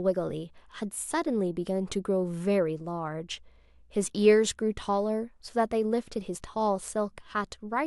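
From 2.56 s to 4.06 s a mains hum sits under the speech: a steady 60 Hz tone with some low harmonics, around 35 dB below the talker. Power-line current has leaked into the signal path, as through a ground loop or a nearby transformer. Unlike handling noise or wind rumble, which wander in level and pitch, this tone holds one fixed frequency and an even level, then stops at 4.06 s.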